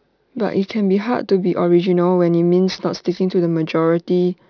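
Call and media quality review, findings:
Aliasing throughout: resampler dropping 16 kHz to 11 kHz with no anti-alias filter. Content above 5.5 kHz folds back as spurious tones, roughly 25 dB below the speech. Sibilants gritty and metallic, spectrum packed hard against the 5.5 kHz edge.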